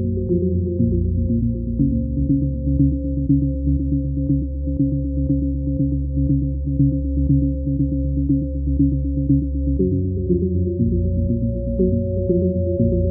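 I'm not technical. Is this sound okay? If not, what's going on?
Yes, nothing here sounds wrong.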